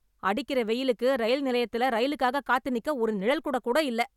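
Listening to this speech recording, nothing stood out as a technical problem at any point.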